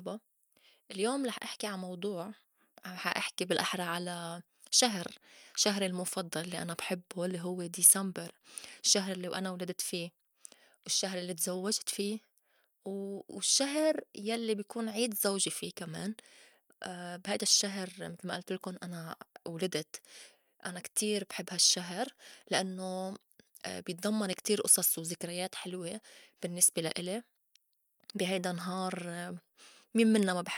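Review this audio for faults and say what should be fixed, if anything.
Nothing to fix; no faults found anywhere in the speech recording.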